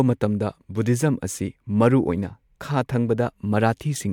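No technical fault can be heard anywhere in the speech, and the signal stays steady and intact across the whole recording.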